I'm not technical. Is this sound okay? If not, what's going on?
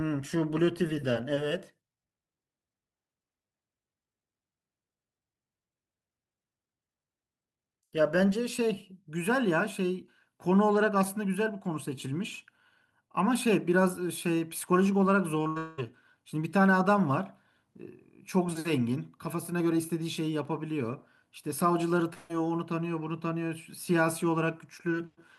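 No. There are two troubled moments, and the first one gets worse in stages.

At 15.43 s comes a short concealed packet loss. About 20 ms of the speech arrived too late, and the receiver filled the hole by stretching the sound just before it. It's only a tiny blur or wobble, short enough that little is lost.

From 15.47 to 15.58 s there is a burst of packet loss. Several pieces in a row, about 80 ms in all, went missing. The filled-in sound lasts long enough to become a held buzz or a fading hiss before the speech continues, so unlike the wobble it replaces a real chunk.

Straight after, from 15.58 to 15.80 s, and again from 22.14 to 22.31 s, the sound is replaced by a drawn-out, fading continuation of the last sound, for about 0.2 s the first time and 0.16 s the second. This is most likely a long network dropout, with nothing arriving for that stretch. It differs from the burst by its length: a whole piece of speech is gone, and the audio resumes further on.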